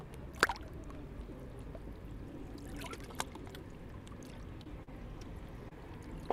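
Brief smears at 4.63 to 4.67 s, 4.83 to 4.89 s and 5.69 to 5.73 s are short concealed packet loss, where the receiver filled 20 to 40 ms gaps from preceding audio.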